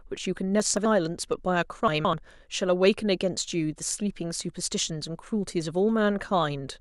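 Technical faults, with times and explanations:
0.60–0.85 s and 1.88–2.13 s, chunks out of order: an 85.33 ms block arrived late and played two blocks after its proper place. Each 0.26 s span of speech sounds jumbled, with three hard joins.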